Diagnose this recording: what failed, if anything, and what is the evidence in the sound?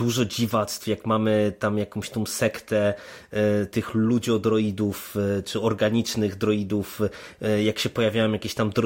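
Nothing failed: the recording carries no audible evidence of a fault at any stage.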